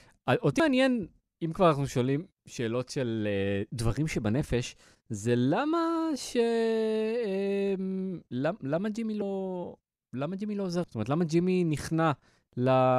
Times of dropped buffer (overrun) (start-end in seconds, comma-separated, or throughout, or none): 0.60, 9.22, 10.84